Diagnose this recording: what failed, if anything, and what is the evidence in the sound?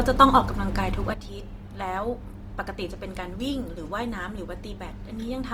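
The codec stage failed. The whole clip has plainly audible coding damage. The speech sounds rough and grainy, and its tonal parts turn noisy rather than swirly. The bandwidth stays full, with content reaching about 20.2 kHz. That points to the music-style transform mode of Opus compression at a low rate, likely around 24 kbps. The encoder keeps each band's energy but fills starved bands with folded or noise content, which causes the grain.

A sudden gain jump occurs at 1.14 s and lasts to the end. The level drops by about 10 dB in a single step, with no fade. The speech and the background noise fall together, so this is not a change in how loudly anyone speaks. The likely cause is a digital gain setting applied between two samples without a ramp, somewhere in the processing or driver stage.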